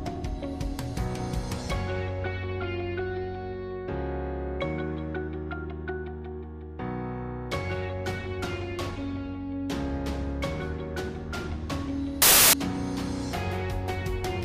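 At 12.22 s the reader starts assembling each sample from the wrong bytes, whether shifted by one byte, swapped in order or misaligned, so the rapidly fluctuating low-order bits end up forming the most significant part of every value. For about 0.31 s, until 12.53 s, the audio is replaced by loud, harsh broadband noise, and then it cuts back to normal sound.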